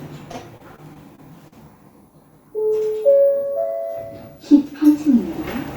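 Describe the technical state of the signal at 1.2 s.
At 1.2 s the signal is inside a stretch of repeated packet loss (robotic sound) running from 0.31 to 1.54 s. Six gaps, the longest 38 ms, are patched by extending the preceding audio, concealing about 12% of the span and producing a choppy texture with pieces missing.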